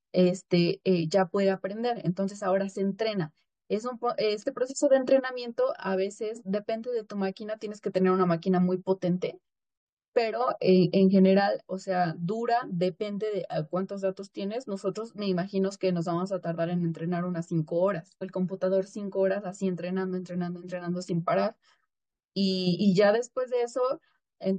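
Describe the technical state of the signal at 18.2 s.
At 18.21 s the speech jumps abruptly forward, with a brief blip at the join, the mark of a stream segment skipped. The likely cause is a segment of the stream that failed to load, so the player carried on with the next one and a stretch of the programme is simply absent. On a waveform this appears as a sudden discontinuity where the envelope changes without transition. A spectrogram shows a thin vertical broadband line at the splice.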